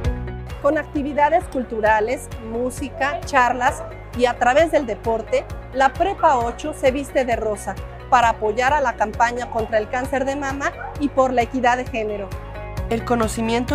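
No technical faults can be heard anywhere in the audio, and the signal stays steady and intact throughout.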